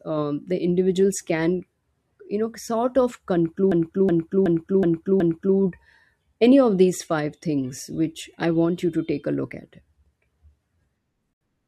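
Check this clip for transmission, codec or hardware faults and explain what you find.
Two faults are audible. From 3.72 to 5.57 s, just after "you know sort of", a system hang loop repeats one 0.37 s piece five times. The computer froze while the hardware kept replaying its ring buffer, which fits a 16384-sample buffer. It sounds like a stutter at 2.69 Hz. At 11.33 s the sound drops to silence for 76 ms, then resumes. This is likely a Bluetooth stall, where delayed packets let the headphone buffer run dry.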